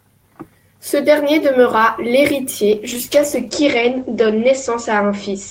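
From 2.73 s to the end, the speech turns duller and rougher, with a watery, smeared texture and the top end gone above 8 kHz, where before it reached 20 kHz. This is a call bitrate drop: the bandwidth estimate fell and the encoder was pushed to code far more coarsely, consistent with a fall from about 32 kbps to about 12 kbps. It sits at its lowest for about 1.56 s and doesn't recover before the clip ends.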